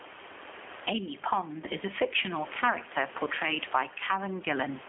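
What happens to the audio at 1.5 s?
At 1.5 s, as through the whole clip, the level is pumping. The gain swings by around 15 dB, so loud and soft parts end up closer in level and the sound is squashed. The likely cause is gain set far too high, with a fast limiter clamping every peak. Unlike plain clipping, the peaks aren't flattened into distortion. It is the rise and fall of the level that gives it away.

The speech also carries clear G.729 coding damage, from an 8 kbit/s codec that rebuilds each 10 ms frame from a vocal tract filter, a pitch predictor and a few pulses. The band sits between 300 Hz and 3.4 kHz, and the sound is rough and slightly synthetic. Plain telephone band-limiting would sound muffled but natural, without that buzzy, rebuilt quality.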